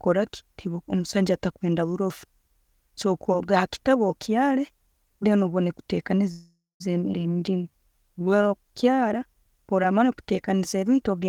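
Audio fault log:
6.31–6.82 s, call audio freeze: the speech stops and the last sound carries on as a fading buzz, then about 200 ms of silence, before resuming exactly where it broke off. Nothing is lost; about half a second is inserted, likely because delayed packets left the jitter buffer empty.
7.12–7.15 s, skip ahead: the speech jumps forward with almost no gap, joining two points that were about a fifth of a second apart. Unlike the freeze just before it, nothing is held or stretched; a short piece of speech is simply missing.
7.34–9.03 s, jitter buffer slow-down: the speech runs at about 90% speed with its pitch unchanged. Repeated pitch periods and pause fragments add 174 ms across this stretch, so sounds are drawn out rather than halted, as the receiver rebuilds its reserve.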